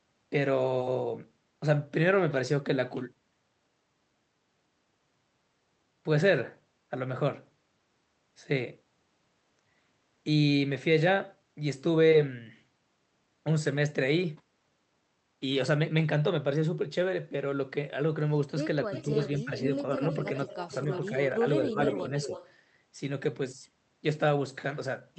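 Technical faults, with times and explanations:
18.87–19.65 s, 20.28–20.35 s and 20.67–22.33 s, speech suppressed in double talk: the voice ducks in pieces while the far side is also talking. The first dip is the deepest, about 15 dB, chopping roughly a third of a second of speech. The later two are gentler, about 5 dB, over a brief blip and then about half a second in total. This is likely an echo canceller that couldn't tell the local talker from loudspeaker echo, so it turned everything down.
18.92–19.42 s, 19.75–21.08 s and 21.72–22.52 s, echo leak: a faint delayed copy of the voice trails the original by about 303 ms, sitting about 15 dB under the speech. It overlaps the suppression dips. This is likely a far end playing the call on a loudspeaker, with its echo canceller not fully removing what its mic picked up, so the leftover came back down the line.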